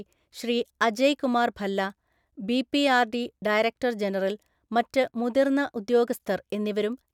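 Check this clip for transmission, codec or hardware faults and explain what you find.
No faults can be heard anywhere in the speech. There is nothing in the recording that needs a fault-by-fault account.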